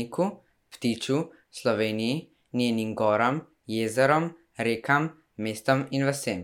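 Nothing stood out on listening to the speech in this recording.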